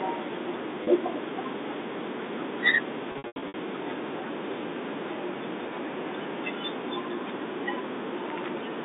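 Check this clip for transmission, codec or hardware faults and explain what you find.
Packet loss with pitch repetition occurs twice in this telephone-band speech, which is carried over G.711 mu-law with its 200 Hz to 3.7 kHz line band.

Packet loss with pitch repetition, at 0.84 s and 3.12 to 3.54 s: when audio went missing, the receiver filled each gap by looping the last pitch period and fading it out. At 0.84 s the gap is 30 ms, consistent with a single lost packet, and it sounds like a brief held buzz. Around 3.12 s, about 270 ms is lost in pieces spread across 420 ms. The longest stretch is 90 ms, long enough for the repeated period to fade nearly to silence before the speech cross-fades back.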